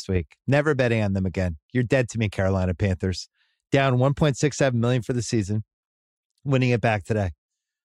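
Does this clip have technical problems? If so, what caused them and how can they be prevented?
No, there's nothing wrong with this one that I can hear, so there's no cause to track down and nothing you need to change next time.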